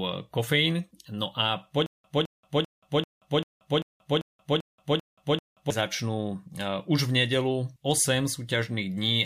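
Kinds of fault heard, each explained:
Stutter with silent gaps: the player or stream likely stalled and, at each retry, replayed its last fragment before running empty. From 1.86 to 5.70 s, a 212 ms burst of speech repeats ten times, with 180 ms of digital silence between repeats.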